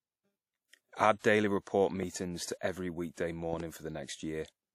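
Throughout the speech there is plainly audible codec damage. The sound rings and washes, and a hiss rises and falls with the voice. Nothing is heard above 16.2 kHz. This is likely WMA compression, a transform codec, and the damage fits a low bitrate near 48 kbps. Each block's quantisation noise spreads over tens of milliseconds. At this rate, weak spectral lines are dropped. That loss makes the wash and the ringing.

From 1.19 to 1.24 s, just before "daily report", there is pre-echo. A short hiss, about 55 ms long, comes ahead of the attack. The onset sounds soft and smeared. The codec spread its noise evenly across a block. The sharp attack fell late in that block. So noise sized for the loud part also filled the quiet gap before it.

From 2.03 to 2.05 s there is a loud pop. It falls between "daily report" and "to every weekday". It is a single sharp pop, roughly 10 dB above the speech. 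The speech carries on underneath. At 3.53 to 3.62 s, after "to every weekday", two pops follow in quick succession, roughly 5 dB above the speech. Each pop is likely a sudden voltage step or pulse added to the signal. That could come from a plug, a switch, static or a driver glitch. Later circuits shaped each pulse into a pop.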